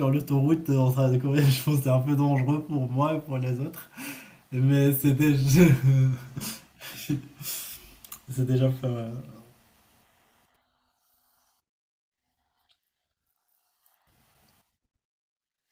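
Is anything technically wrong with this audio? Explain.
No, no technical faults heard.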